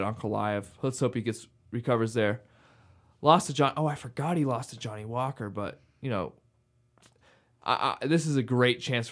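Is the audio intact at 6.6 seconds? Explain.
Yes, the audio is intact at 6.6 seconds, with no fault present at that moment.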